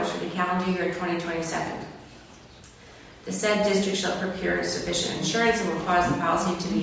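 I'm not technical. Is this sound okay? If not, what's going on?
Yes, nothing technically wrong can be heard anywhere in this recording.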